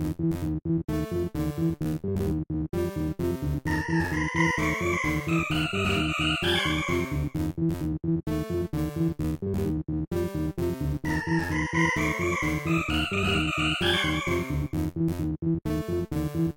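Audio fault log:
Throughout: channel delay (doubling). One channel arrives about 42.7 ms behind the other, a lag that fits a 2048-sample buffer. When the two are summed to mono, that late copy sits at the same level as the original, so every onset is heard twice in quick succession, a distinct slap or doubled attack rather than a single clean event. At this spacing the copy is too late to blend with the first and registers as its own echo.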